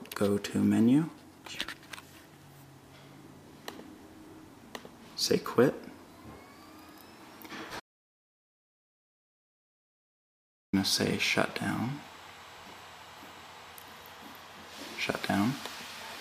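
At 7.80 s the audio drops out to silence and stays there until 10.73 s, so about 2.93 s of material is simply gone. The cause was likely a lost input, such as a disconnected device, a broken link or an accidental mute, with the recorder still writing silence. What separates it from a noise gate or fade is the abruptness at both edges and the total absence of room tone throughout the gap.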